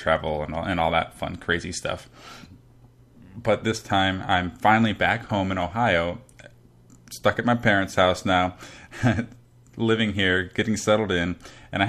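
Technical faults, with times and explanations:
Nothing technical trips up in this bit of speech, so there's no fault to list here.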